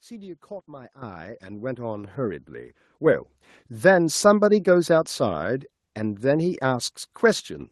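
At 1.02 s the microphone volume is stepped up by about 10 dB, then again at 2.04 s by about 5 dB. Each time the call software raised the device's input gain in one jump, so the speech and the background noise get abruptly louder together.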